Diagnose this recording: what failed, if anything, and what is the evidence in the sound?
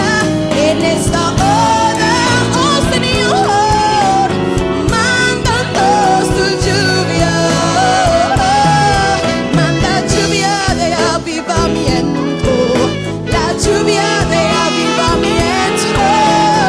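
Nothing failed in this recording, and the sound gives no evidence of a fault at any stage.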